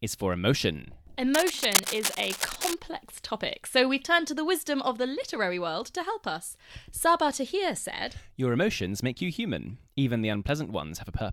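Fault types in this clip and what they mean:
Cable scratch noise: from 1.34 to 2.76 s, after "is for emotion" and before "topic so we've turned", dense, uneven scratchy bursts sit over the speech at roughly its own level, likely from a worn cable or connector being moved so its contact resistance fluctuated.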